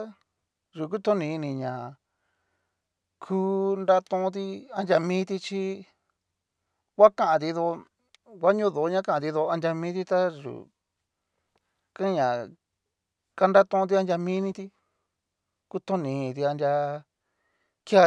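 Nothing in this speech recording points to a technical fault, with the signal holding steady and intact throughout.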